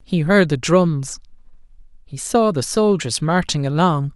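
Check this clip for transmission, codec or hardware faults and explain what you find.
I find no faults in this clip.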